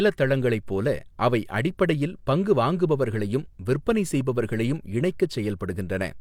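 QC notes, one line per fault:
No faults were detected on listening to this speech clip.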